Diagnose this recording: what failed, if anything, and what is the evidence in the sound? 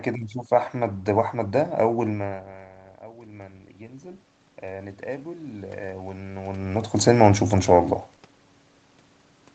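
From 2.21 s to 6.71 s the voice and the room noise behind it swell together, slowly climbing by about 10 dB. This is automatic gain rising in the call processing: the input fell about 19 dB when the talker moved back, and the AGC gradually raised its gain to compensate.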